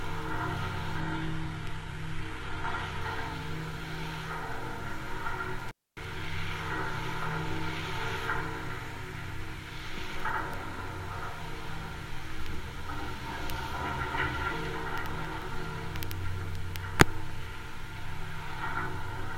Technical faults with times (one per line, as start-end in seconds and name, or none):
1.01-3.01 adaptive stream at a lower bitrate
5.59-6.09 intermittent contact